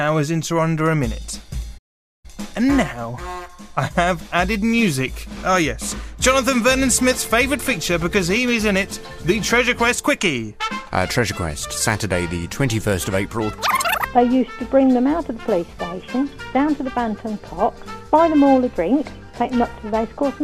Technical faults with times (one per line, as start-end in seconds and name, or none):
1.77-2.26 playback stall